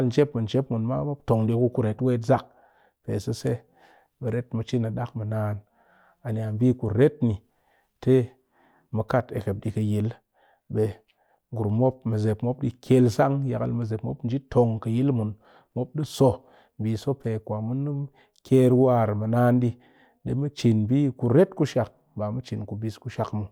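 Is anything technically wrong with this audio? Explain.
No, nothing is technically wrong.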